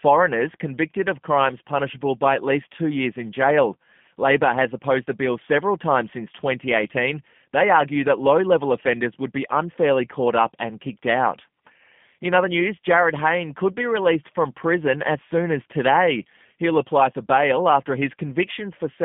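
From start to end, the speech passes through a G.729 codec at 8 kbit/s. Nothing above 3.6 kHz survives. The rebuilt voice sounds rough and plainly synthetic.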